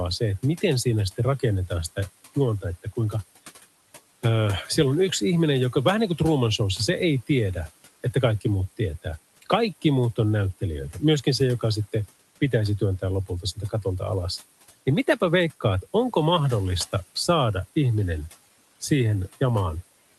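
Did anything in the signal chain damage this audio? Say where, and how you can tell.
Yes. The damage is in call processing: the noise suppressor mistook part of the speech for background noise between 13.27 and 13.85 s, just after "joka sitten pitäisi työntää". Its gain dropped by as much as about 12 dB, pulling low-level speech energy down along with the room noise, so brief fragments totalling around a tenth of a second come out swallowed and faint.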